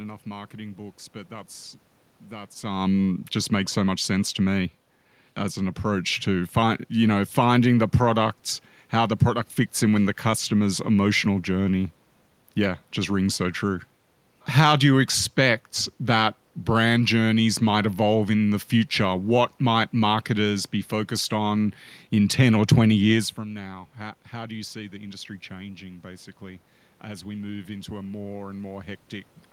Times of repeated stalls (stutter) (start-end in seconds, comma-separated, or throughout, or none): none